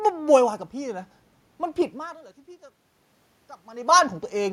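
No technical faults can be heard in the signal path; the background noise belongs to the room itself, and the level changes around two seconds and again around three and a half seconds are the talker shifting position relative to the microphone.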